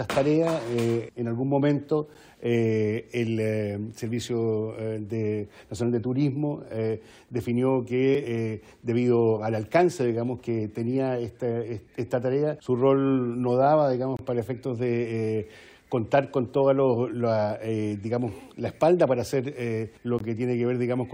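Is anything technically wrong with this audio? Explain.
Yes. There are gaps between stream segments at 2.14 s, 8.15 s, 14.17–14.19 s and 20.19 s, recurring every 6 seconds. The timestamps of consecutive segments don't line up, so the player inserts silence into each gap: about 10 ms, 4 ms, 26 ms and 18 ms respectively. Each appears as a brief hole with abrupt edges. The sound cuts out and resumes, but nothing is missing from the audio.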